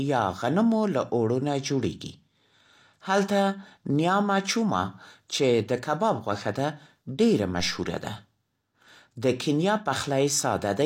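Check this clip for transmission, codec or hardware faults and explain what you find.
One fault is present, a DC step at 7.60 s, just after "کباب غوښه ده ډېره". The waveform's zero line suddenly jumps to a new offset, the kind of shift a converter recalibrating or an offset input being switched in would cause. The offset doesn't hold. It drains away as a high-pass filter at about 2 Hz pulls the baseline back to zero. The abrupt jump is heard as a brief low thump or click, while the speech itself carries on unchanged.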